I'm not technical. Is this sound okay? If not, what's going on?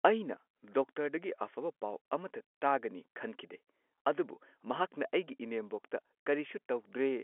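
Yes, this is ordinary telephone speech with nothing wrong, and the narrow, phone-like tone is simply how a regular landline call sounds.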